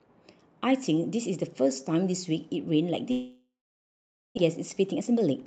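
From 3.11 to 4.39 s the sound most likely suffers a long network dropout: packets stopped arriving, and the receiver had to fill about 1.26 s with concealment. The last speech sound is stretched into a fading buzz or hiss, then gives way to roughly 0.83 s of silence. When audio resumes, about 0.86 s of speech is simply gone, and the stream comes back carrying extra delay, on the order of 0.4 s.

That extra delay triggers a jitter buffer speed-up from 4.55 to 5.42 s. With more audio queued than it aims to hold, the receiver repeatedly trimmed out short pitch-period-sized slices, removing something like 150 ms in total. The speech plays at about 115% of its normal rate with the pitch unchanged, so the closing phrase sounds hurried. Through the Opus call path the speech stays band-limited to 8 kHz.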